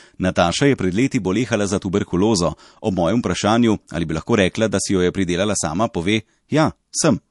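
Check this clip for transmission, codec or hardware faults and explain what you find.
One fault runs through the whole recording: MP3 compression, audible from start to finish. Nothing reaches above 11.3 kHz, a hard treble ceiling an encoder imposes at a fixed frequency, and the damage is plain, which fits a low rate of about 48 kbps. Quiet spectral detail is being dropped and restored frame by frame, giving the speech a watery, swirling quality, with metallic chirps on s sounds and smeared consonant attacks. That flickering swirl separates it from a simple low-pass filter, which would only dull the top. It is likely an MP3 encode rather than another codec, given the fixed cut-off and these artefacts.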